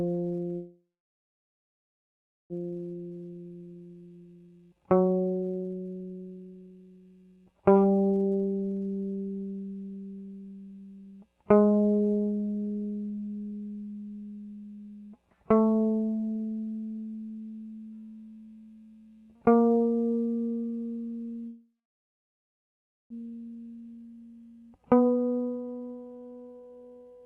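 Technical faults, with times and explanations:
0.55–2.53 s, call audio freeze: the music halts and its last sound is drawn out into a short buzzing tail that fades, then about 1.67 s of silence. Playback resumes where it stopped, nearly 2 s late. The likely cause is delayed packets draining the jitter buffer. The waveform shows a decaying tail and then a flat line, and the spectrogram shows a smeared band and then a blank column.
2.71–8.89 s, jitter buffer speed-up: the music runs about 131% fast at unchanged pitch, so the tempo rushes and wavers. The receiver was shedding excess buffered delay by cutting many pitch-period-sized slices, about two seconds in total. The spectrogram shows compressed note durations with tiny splice seams, and the waveform shows events packed closer together.
21.48–23.13 s, call audio freeze: the music stops again, leaving a brief fading buzz and then about 1.39 s of silence, and resumes about 1.6 s late with nothing lost. 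The waveform shows a short decaying tail and then a flat line, and the spectrogram shows a blurred strip followed by an empty column.
23.50–27.25 s, jitter buffer speed-up: the music plays about 132% fast at the same pitch, with a hurried, uneven tempo, as roughly a second of audio is trimmed away in short pitch-period pieces. Harmonic lines on the spectrogram, capped near 12 kHz by the Opus call codec, show shortened durations and faint splice seams.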